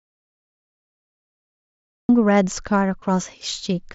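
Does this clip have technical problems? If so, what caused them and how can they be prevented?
Yes. From the start until 2.09 s there is an audio dropout to silence: the clip opens already cut out, and the gap is silent with no room tone at all, which sets it apart from a quiet pause or a noise gate closing. The likely cause is a lost input, such as a disconnected headset or a stray mute, while the recorder kept writing. Start recording only once the input meter shows a live signal, and keep the device paired and unmuted.

From 3.00 to 3.02 s there is concealed Bluetooth headset packet loss lasting about 22.5 ms, which fits roughly three lost frames of the wideband mSBC link. The receiver filled the gap by repeating recent waveform, so it sounds like a brief buzzy blip at full level rather than a silent hole, and it is confined to one spot, unlike the light codec graininess spread over louder syllables. 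Keep the headset close to the phone, with no obstructions or competing 2.4 GHz traffic.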